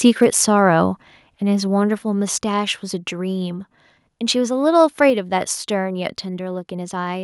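Speech clip, and right at the start, from 0.06 to 0.25 s, there's microphone overload: the peaks push about 1 dB past the converter's limit, so a small fraction of samples get their tops sheared off, giving that crackly, harsh edge, most likely from input gain set too hot. Then at 5.1 s the microphone volume steps down, with the voice and room dropping by about 4 dB in one go. That's likely the call software's automatic gain control pulling the device level back after hearing it run loud.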